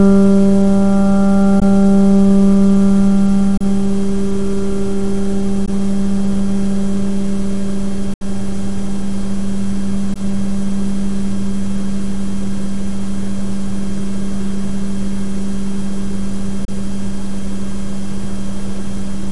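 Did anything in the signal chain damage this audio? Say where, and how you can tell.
Yes. There are six Bluetooth dropouts at playback, likely caused by the wireless link to the headphones: 1.60–1.62, 3.57–3.62, 5.66–5.69, 8.14–8.22, 10.14–10.20 and 16.65–16.69 s. Each is a sudden silent hole, after which the sound resumes further along, as if it had kept playing. The audio lost in each is a whole multiple of roughly 14 ms, which fits lost radio frames that reached the headphones too late and were discarded.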